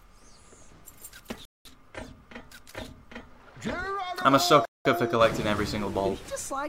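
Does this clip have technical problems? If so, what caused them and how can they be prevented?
Yes. There is a gap between chunks at 1.45 to 1.65 s and again at 4.65 to 4.85 s, each a 200 ms hole in the audio. The two are 3.2 s apart, which fits 3 s chunks with 200 ms of silence inserted at each join, either from padding in the codec or a player starting each chunk late. The audio resumes where it stopped rather than skipping material. To prevent it, trim codec padding and queue each chunk ahead of time so playback continues without a gap.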